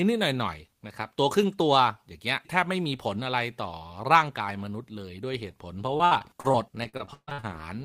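From 5.97 to 7.45 s the speech turns choppy and robotic, broken by a rapid run of short holes, the longest about 140 ms. This is repeated packet loss: audio kept arriving late or not at all, and each gap was patched by extending the preceding sound, covering roughly a third of that stretch.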